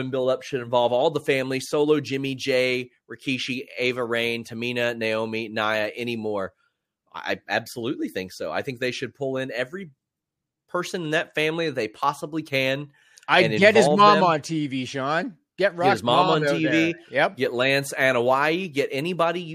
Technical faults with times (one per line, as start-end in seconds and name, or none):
none